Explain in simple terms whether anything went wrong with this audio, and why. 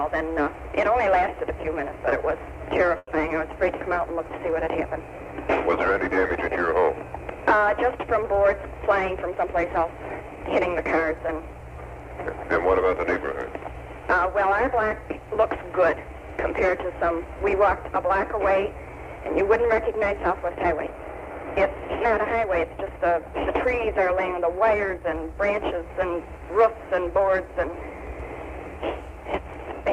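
Call audio freeze at 2.97 to 3.09 s: the sound briefly turns into a fading buzz or hiss, then a moment of silence. This is likely because data arrived late and the receiver ran out of sound to play, so it stretched the last bit. Nothing was lost; the audio resumes where it stopped, about a tenth of a second later.

Jitter buffer speed-up from 8.37 to 10.37 s: the sound plays about 5% fast at the same pitch and can feel slightly hurried. The receiver had built up extra delay and trimmed many tiny slices, about a tenth of a second in total, to catch up.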